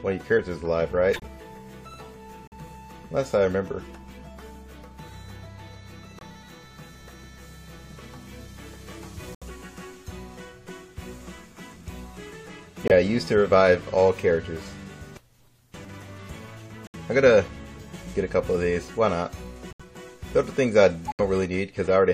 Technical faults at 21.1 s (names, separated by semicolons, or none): corrupt frame muted